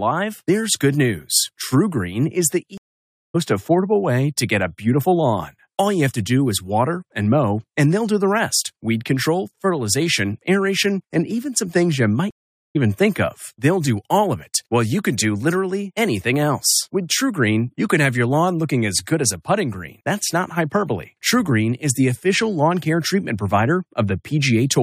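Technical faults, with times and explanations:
2.78 to 3.36 s, stream reconnect: After "is the", the sound drops out for 567 ms and comes back at "affordable way to get". The link broke, and the player reconnected and restarted its decoder. It rejoined the live stream about 0.7 s further on, so that stretch is lost.
12.31 to 12.77 s, stream reconnect: After "even some things you", there is 444 ms of silence, then "even think of". The same reconnect happened again, this time skipping roughly 0.2 s.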